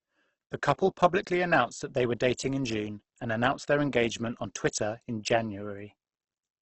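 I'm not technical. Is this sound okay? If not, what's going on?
No, it isn't okay. From start to finish the speech sounds rough and grainy rather than watery or swirling, with nothing above 8.2 kHz, so it lacks crispness. That points to heavy Opus compression, likely squeezed hard to save data, not an MP3-style fault.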